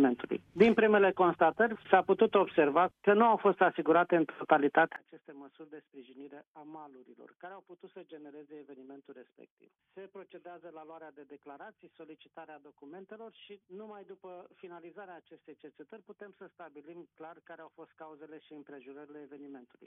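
From 4.96 s to the end, the sound drops by about 24 dB and turns faint, with the centre nearly gone. That fits one channel inverted: the likely cause is one stereo channel with reversed polarity, so material shared by both channels cancels in a mono sum. On a waveform the amplitude collapses abruptly at 4.96 s; a spectrogram shows the whole band darkening.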